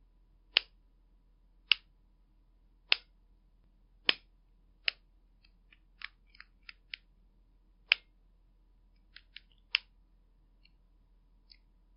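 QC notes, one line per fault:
No faults found on listening; nothing to log.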